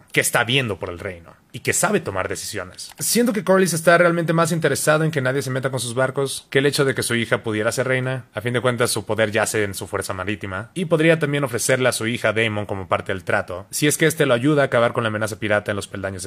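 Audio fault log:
Nothing stood out on listening, and there is nothing to log.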